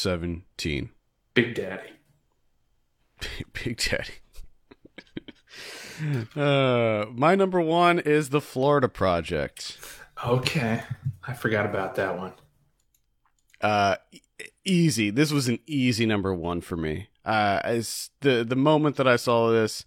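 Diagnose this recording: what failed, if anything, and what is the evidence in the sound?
Nothing failed at any stage: the recording carries no audible fault from capture through to playback.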